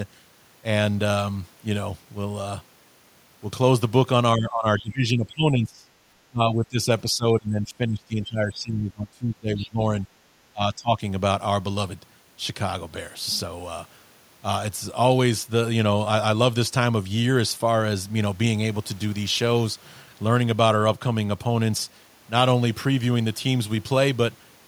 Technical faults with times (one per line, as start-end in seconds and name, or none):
4.36-5.90 speech suppressed in double talk
6.29-9.82 speech suppressed in double talk
9.61-9.69 other side's voice leaking through
10.53-11.00 speech suppressed in double talk